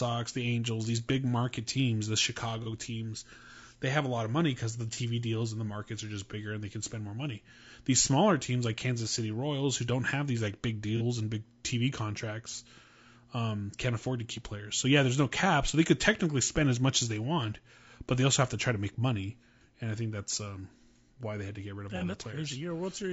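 From start to finish the speech has a rough, grainy edge, with noise creeping in between the voice harmonics and a top end that sounds thin and a bit synthetic. That's plainly audible low-delay AAC compression, likely AAC-ELD at a fairly lean rate, something around 32 kbps. Its short frames can't pin down the pitch harmonics well, so the encoder smears energy into the gaps and skimps on the highs.

On top of that there are four short AAC frame loss with concealment events, each the length of a single lost frame, about 30 ms of missing audio. The decoder patches each hole from the last good spectrum, so you hear a brief smeared, phasey blip rather than a dropout. They land at 2.63 to 2.67 s; 4.94 to 4.99 s, right after "of money because the" and before "deals and the markets"; 10.97 to 11.02 s, between "have these like big" and "and big"; and 21.98 to 22.03 s, just after "to get rid of".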